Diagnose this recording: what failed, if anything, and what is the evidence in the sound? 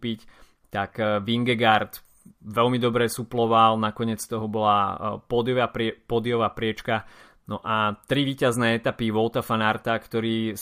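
Nothing failed; no fault is audible in this recording.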